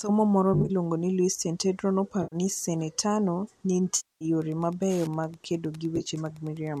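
AAC frame loss with concealment hits at 0.54–0.71 s (about 90 ms lost in short runs), 2.23–2.36 s, 3.96–4.25 s (250 ms) and 5.96–6.09 s. These are smeared, hazy patches where the decoder patched missing frames from earlier spectrum, showing as blurred, harmonic-free blocks on a spectrogram. From 4.40 s onward, Wi-Fi interference adds faint ticking every 102.4 ms, about 30 dB below the signal, visible as evenly spaced vertical hairlines, over what is likely low-delay AAC coding.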